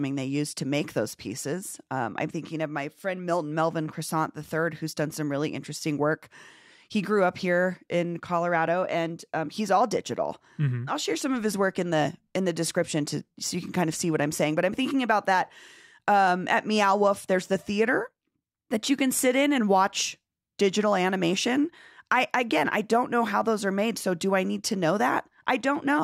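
No technical faults can be heard anywhere in this recording.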